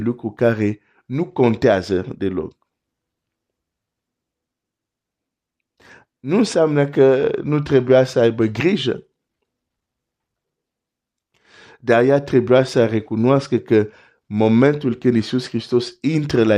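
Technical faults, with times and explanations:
The speech signal holds steady from beginning to end, with no technical faults to be heard.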